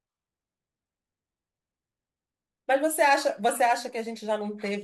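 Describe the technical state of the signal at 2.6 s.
At 2.6 s the speech signal is intact, with no audible technical fault at that moment.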